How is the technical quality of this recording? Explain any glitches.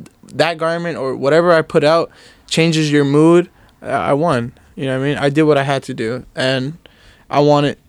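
The recording has mild hard clipping in four places: 0.41 to 0.48 s, 1.34 to 1.93 s, 5.25 to 5.73 s and 7.37 to 7.54 s. Peaks exceed the level some stage can pass by about 1 dB and are sliced flat, so brief crackle rides on loud speech. Unlike soft saturation, the edges are abrupt and the added harmonics reach high.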